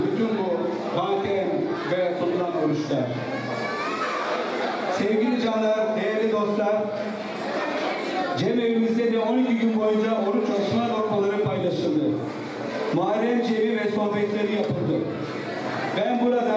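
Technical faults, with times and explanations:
No technical faults can be heard in this audio.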